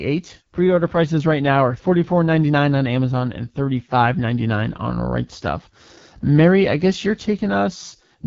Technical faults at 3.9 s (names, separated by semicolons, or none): AMR wideband (HD Voice) codec